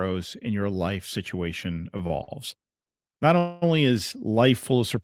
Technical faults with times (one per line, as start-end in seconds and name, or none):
1.97-2.30 short stall from a late packet
3.38-3.64 call audio freeze